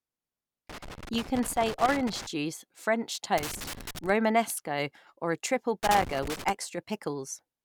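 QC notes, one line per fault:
0.70–2.26 s, 3.38–4.09 s, 5.83–6.50 s: loose connector crackle. In three bursts, a worn contact rapidly makes and breaks, chopping the speech. The waveform shows ragged dropouts and sharp spikes, and the spectrogram shows scattered full-height vertical streaks.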